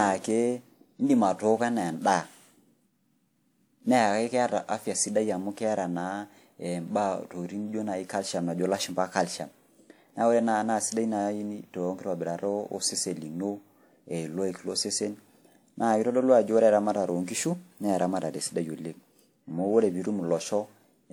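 From start to finish the speech sounds swirly, hollow and smeared, with consonant attacks blurred and a watery shimmer that builds across the spectrum, yet the treble is still present up to about 20.1 kHz. That combination points to generation loss, most likely from the audio being lossily encoded about four times, which fits a WMA chain at around 96 kbit/s. A single low-bitrate encode would cut the top end and sound dull. Here the bandwidth survives, but each re-encode on a shifted frame grid has stacked new quantisation noise on the last.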